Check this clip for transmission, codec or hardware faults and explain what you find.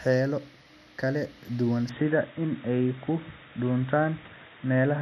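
One fault. Input switched to a poorer device, from 1.89 s after "kala duwan" to the end: the speech suddenly loses everything above 3.8 kHz and sounds dull and boxy, with a faint new noise floor, at unchanged level and with no gap. This is likely a mid-recording change to a narrower-band microphone or a headset call profile.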